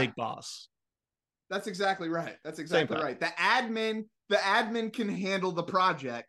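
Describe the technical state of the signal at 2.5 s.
At 2.5 s the speech signal is intact, with no audible dropout, distortion or other technical fault at that point.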